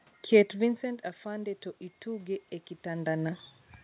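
Automatic gain rising from 0.52 to 3.47 s: after the talker moves and the input drops about 14 dB, the gain control slowly lifts voice and room noise together by about 4 dB.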